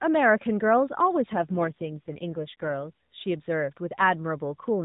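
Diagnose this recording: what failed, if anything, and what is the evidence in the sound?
The failure is at the network and codec stage, an AMR rate drop. From 1.3 s to 2.9 s the speech turns buzzier and more synthetic, with no gap and no change in bandwidth. The narrowband AMR path still stops at 4 kHz throughout. The roughness fits the link switching the codec from 12.2 kbit/s down to 5.9 kbit/s, probably to spend bits on error protection over a weak radio link. Fewer bits describe the excitation pulses less precisely, until the rate recovers.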